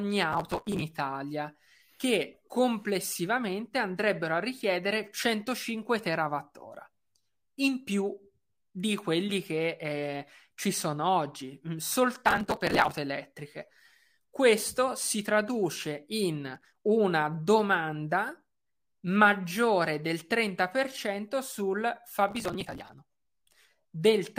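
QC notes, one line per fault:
0.33–0.82 s, 12.26–12.97 s (after "ci sono oggi mm"), 16.55–16.81 s (between "si traduce in" and "una domanda"), 22.29–22.93 s: processor overload crackle. Bursts of gritty, tearing crackle ride over the speech and stop abruptly. The processor fell behind and missed a long run of buffer deadlines in a row. The sound points to buffers of about 5 ms. Each missed buffer was skipped outright, leaving a tiny hard-edged gap, and dozens of these back to back fuse into continuous crackle.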